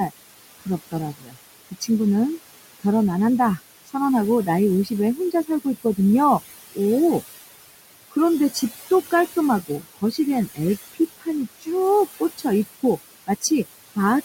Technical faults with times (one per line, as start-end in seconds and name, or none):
0.00-14.24 noise suppressor artifacts
0.07-1.89 speech cut by the noise suppressor
3.57-5.98 speech cut by the noise suppressor
8.11-13.97 speech cut by the noise suppressor